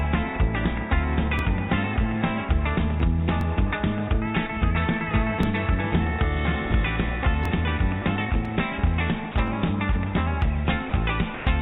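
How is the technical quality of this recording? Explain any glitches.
The recording has two recurring faults: a periodic stutter from overlapping chunks, and three short dropouts near the end that point to the voice detector. The call path's band limit is also audible, with nothing above 4 kHz.

Overlapping chunks: At 1.39, 3.41, 5.43, 7.45 and 9.48 s, a slice of about 21 ms plays twice. The audio was handled in 2 s blocks, and each block began slightly before the previous one finished. The doubled segment at every join produces a regular click-stutter on a 2 s cadence.

Sound dropped by the voice detector: At 9.32 s and 10.90 s, 30 ms of sound drops out, and from 11.35 to 11.47 s a 120 ms stretch goes. Each gap is filled with steady low-level comfort noise before the sound resumes. The likely cause is the sender's voice detector misjudging quiet sound as background and pausing transmission.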